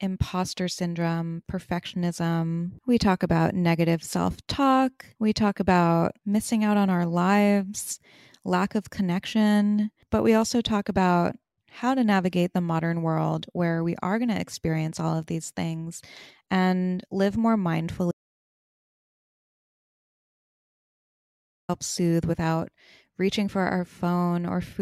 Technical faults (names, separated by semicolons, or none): audio dropout to silence